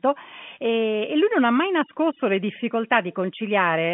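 Nothing stood out on listening to this speech, which comes through the narrow telephone band of a G.711 line.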